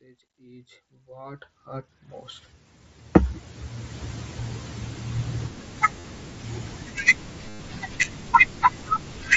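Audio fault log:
6.00–6.04 s and 7.49–7.60 s, concealed Bluetooth headset packet loss. Packets from the mSBC headset link went missing, about 45 ms and then 105 ms of audio. The receiver filled each gap by repeating the best-matching recent stretch of waveform. Each gap holds a buzzy, steady tone at full level. A slight warble follows as real audio resumes and the patched cycles meet fresh signal.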